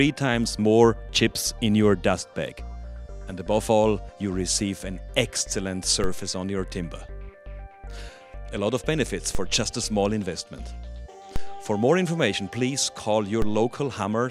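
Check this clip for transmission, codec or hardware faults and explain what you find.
Four low thumps interrupt the audio, at 6.04, 9.35, 11.36 and 13.42 s, while the sound itself carries on unchanged. Each is a DC step: the waveform's zero line jumps by about −16 to −15 dBFS, then drains away slowly through a roughly 2 Hz high-pass, so each jump lands as a low thump.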